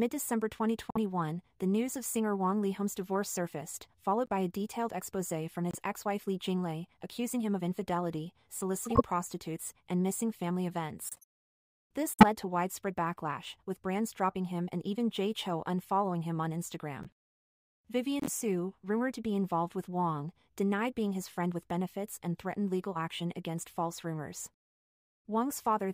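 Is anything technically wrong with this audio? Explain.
Yes. Corrupt frames are decoded at 0.90–0.97, 4.26–4.31, 5.71–5.75, 8.85–9.01, 11.04–11.24, 12.14–12.24, 17.03–17.10 and 18.20–18.29 s. Each time, damaged frames were played as-is, so misread gains and codes put energy at the wrong frequencies. The result is brief chirps and noise bursts, loudest near 8.9 and 12.1 s. Unlike a dropout, the sound isn't lost; spurious sound is added.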